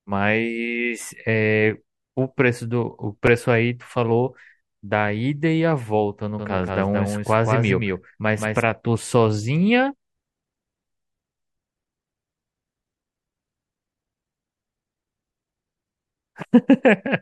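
Speech with two brief repeated buffer stutters, at 3.27 s and 13.31 s. Each is a 5.33 ms slice (fitting a 256-sample buffer) replayed once, then twice, showing on the waveform as identical back-to-back cycles with hard joins. From 6.39 s to 8.63 s a doubled audio track follows about a fifth of a second behind, some 5 dB quieter. On a spectrogram it appears as a full-band shadow with no reverberant tail, starting and stopping abruptly, most likely from a second, slower capture path.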